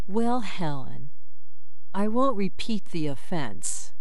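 From start to end the speech carries a DC offset of about -19 dBFS, a constant shift off zero. It is inaudible but wastes headroom and adds steady energy at 0 Hz.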